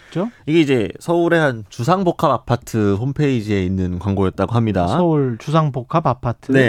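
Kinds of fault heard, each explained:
No technical faults can be heard anywhere in the speech.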